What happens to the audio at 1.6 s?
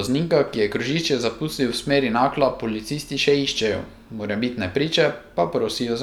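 Nothing goes wrong at 1.6 s; the speech plays through that moment intact, with no dropout, click or distortion.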